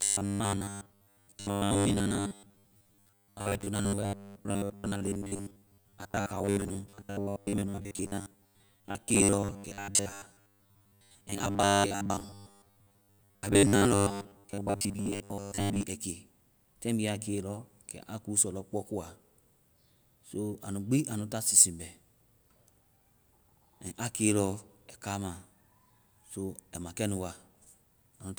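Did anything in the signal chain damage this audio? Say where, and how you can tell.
Yes. At the buffer stage, audio likely arrived too seldom from 0.01 s to 15.8 s, so roughly 70 percent of the time the last 10 ms was replayed, which accounts for the robotic sound from repeated short buffers: a rigid, metallic 100 Hz buzz loosely following the speech.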